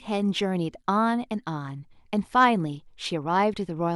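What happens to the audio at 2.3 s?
Nothing goes wrong at 2.3 s; the speech runs through that moment intact, with no break, click, dropout or other fault.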